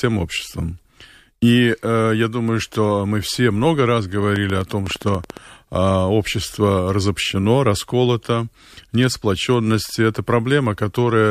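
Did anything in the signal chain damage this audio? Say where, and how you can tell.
Yes. From 4.36 to 5.38 s a train of clicks rides over the speech, about 12 per second at an irregular spacing, roughly fifteen in all, peaking about 10 dB above the signal. The pulses share one shape and persist in gaps, so they were added in the chain rather than coming from the source. The likely stage is the analogue wiring or interface, with nearby equipment injecting bursts of interference.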